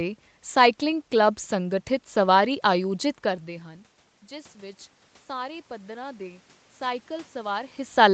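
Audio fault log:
4.28–7.78 s automatic gain rising: the input level fell by about 18 dB, and the automatic gain control answered by raising its gain gradually, by about 5 dB over three and a half seconds. Speech and the room noise behind it swell together instead of the voice alone coming forward, so the background grows while the voice stays well under its earlier loudness, because the correction makes up only a fraction of the drop.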